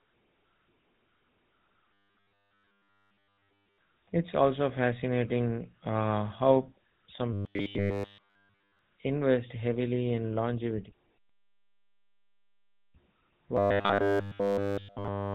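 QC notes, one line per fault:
Throughout: GSM full-rate codec. The speech carries the plainly audible buzzy, gravelly roughness of this early mobile-phone codec, which fits a 13 kbps stream. The codec rebuilds the voice from a vocal-tract model driven by a sparse pulse train. That thinned excitation is what grates on the ear. Nothing is heard above about 4 kHz, so sibilants and airiness are gone and the voice sounds boxed in.
1.93–3.78 s, 7.33–8.79 s and 13.57–15.34 s: robotic sound from repeated short buffers. In each span the speech turns into a rigid metallic drone. A fixed buzz at 100 Hz sits on top and only loosely follows the speech. The likely cause is playback starving for new audio and looping the last 10 ms segment over and over. Almost nothing in these spans is fresh audio. The 10 ms loop length sets the 100 Hz pitch.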